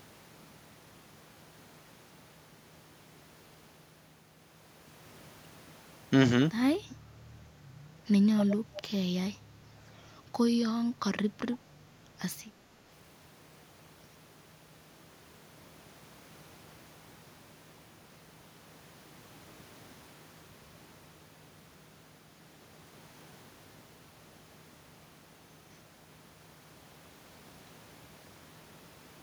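At 6.90 to 6.96 s a faint, delayed copy of the speech surfaces, about 25 dB below the direct sound and trailing it by 262 ms. A stronger scrap, only about 10 dB down, appears at 8.38 to 8.45 s, and a third at 8.76 to 8.81 s sits about 20 dB down. All three share the same 262 ms lag, so they are likely an echo leak: the far end's loudspeaker output reached its microphone and the echo canceller did not fully remove it before sending it back.

Between these, at 8.60 to 8.76 s, the room background dips by up to about 8 dB for roughly a sixth of a second. It dips again at 9.37 to 9.76 s, by up to about 7 dB, for around 0.4 s. This is background gated by the echo canceller. While the loudspeaker was active, the canceller pulled the microphone gain down hard, so the ambient sound briefly thins out and then returns once the suppression releases.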